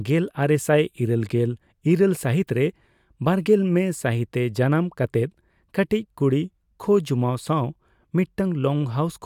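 No technical faults are audible.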